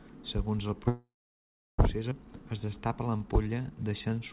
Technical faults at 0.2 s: none

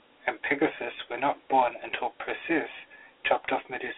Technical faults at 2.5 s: Dialogic VOX ADPCM

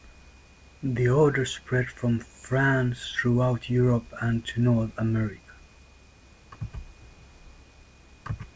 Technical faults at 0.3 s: none

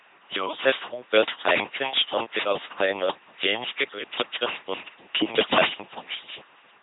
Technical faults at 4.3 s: LPC-10 vocoder

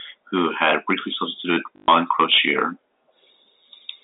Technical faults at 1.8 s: microphone overload; packet loss with last packet repeated

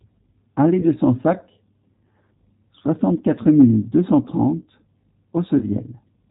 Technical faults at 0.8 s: G.729 codec; VoIP packet loss concealed by the speech codec

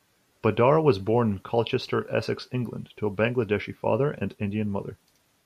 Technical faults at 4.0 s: none

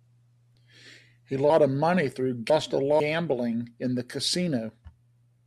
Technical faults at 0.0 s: none

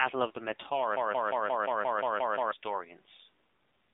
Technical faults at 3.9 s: AMR narrowband mobile codec

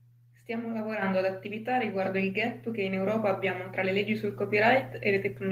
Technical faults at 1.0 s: microphone volume stepped up

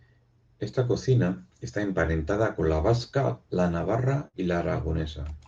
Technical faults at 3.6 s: none

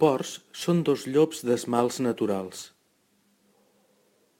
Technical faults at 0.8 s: crude rate conversion

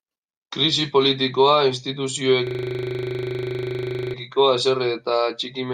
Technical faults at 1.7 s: none

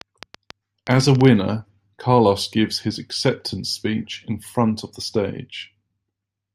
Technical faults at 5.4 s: none

